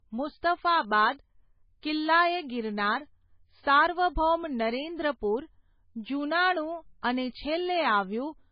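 Low-bitrate audio saved at a high bitrate runs through the whole speech clip. Nothing is present above 5 kHz, so sibilants and breath noise sound dull and boxy, with the smeared, warbly texture of heavy MP3 compression. The likely cause is an early MP3 encode at a very low bitrate, around 16 kbit/s, later re-saved as a much larger MP3. That second pass cannot rebuild the discarded highs or undo the earlier artefacts.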